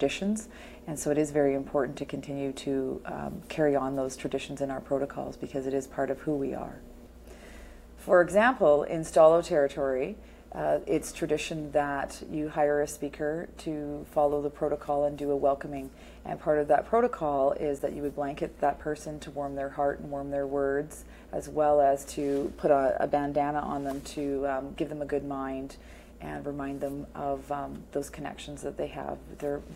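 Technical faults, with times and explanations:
15.77 s and 17.79 s, underrun with held sample: the output buffer briefly ran dry and the converter froze on its last value, about 1 ms and about 9 ms. The waveform shows a short flat step. A similar stretch of audio was lost each time.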